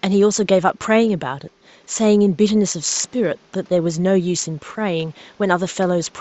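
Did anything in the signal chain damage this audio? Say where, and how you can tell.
No, nothing in the chain has damaged this speech; the only thing under it is the room's own background noise, sitting about 35 dB below the voice, which was picked up by the microphone rather than added by any stage after it.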